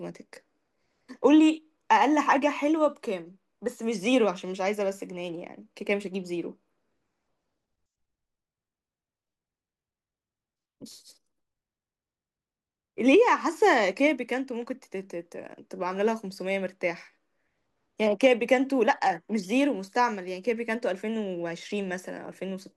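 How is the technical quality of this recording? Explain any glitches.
No glitches or technical faults can be heard anywhere in the recording.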